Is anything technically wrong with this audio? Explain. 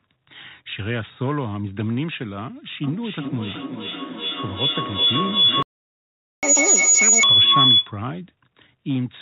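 Yes, there are three problems, all in the middle of the clip.

Feedback howl, 2.83 to 8.03 s: a tone at roughly 3 kHz builds until it's about 10 dB louder than the speech, pulsing every 400 ms or so. That's two devices on the same call in one room, each pass through mic and speaker adding gain until the loop rings at its favoured frequency.

Playback stall, 5.63 to 6.43 s: the audio just drops out for about 0.8 s, right in the middle of the howl. The likely cause is the player running dry or its thread getting blocked, so nothing reached the output until it recovered.

Catch-up at higher speed, 6.43 to 7.23 s: right after the gap everything runs at double speed, with pitch jumping up around ten semitones, so it sounds chipmunky. The player is resampling its backlog to win back the lost time, then drops back to normal.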